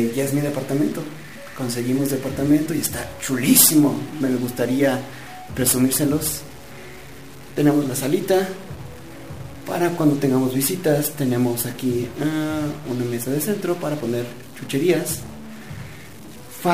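Throughout the clip, a stuck bit adds harsh, buzzy distortion and fills the pauses with noise, likely from one converter bit fixed, each error step about -35 dBFS.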